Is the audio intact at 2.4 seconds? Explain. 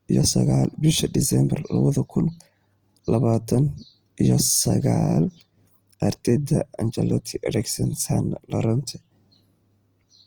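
No. At 2.4 seconds, as throughout the speech, the damage likely comes from Opus compression in its CELT music mode at a rate near 24 kbps, where starved bands get filled by folding or noise. Tones sound plainly grainy and rough, though the band still reaches about 20.2 kHz.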